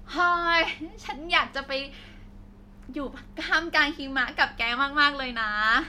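A short speech recording with no technical faults to report. Nothing in the audio points to a problem at any point in the chain.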